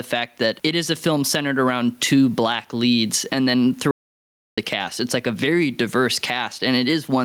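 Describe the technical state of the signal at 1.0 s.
Gain pumping is present at 1.0 s, as it is throughout the clip. The gain swings by around 15 dB, bringing loud and soft parts closer in level. The likely cause is input gain set far too high, with a fast limiter pulling it down.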